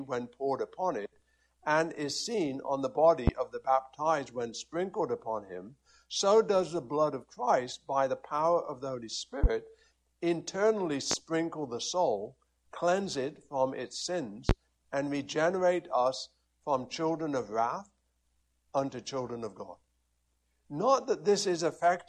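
Loud pops at 3.27–3.31, 9.44–9.47, 11.11–11.15 and 14.49–14.53 s, each a single thump roughly 15–20 dB above the sound, likely from a voltage pulse; unlike a dropout, the sound continues beneath.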